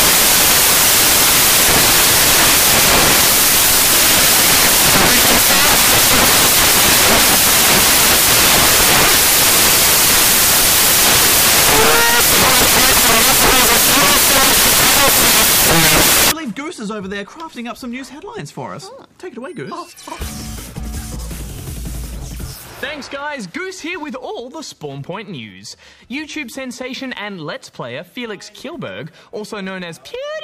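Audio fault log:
0.00–16.32 s, samples built from the wrong bytes: the reader assembles each sample from its bytes incorrectly, whether by landing one byte off, swapping the byte order or assuming a different alignment, so the rapidly changing low-order bits end up as the most significant part of every value. The result is loud, harsh broadband noise in place of the intended sound, close to white noise where the material is loud, until the fault clears at 16.32 s.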